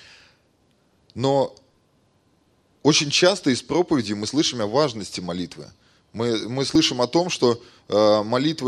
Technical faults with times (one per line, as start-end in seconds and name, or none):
4.28 audio missing between chunks
6.75 audio missing between chunks